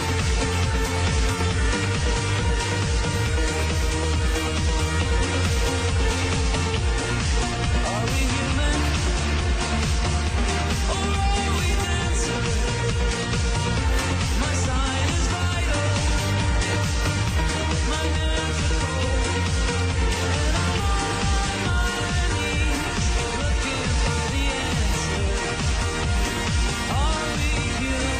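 No technical faults can be heard anywhere in the audio, and the signal stays steady and intact throughout.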